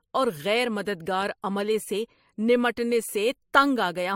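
Throughout the speech, nothing sounds above 16.4 kHz, and two different textures of coding smear overlap, which points to transcoding between lossy codecs, likely a low-bitrate MP3 re-encoded to AAC. A single lossy encode would leave only one consistent artefact character.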